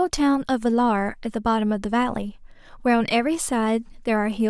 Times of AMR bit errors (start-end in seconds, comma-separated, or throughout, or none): none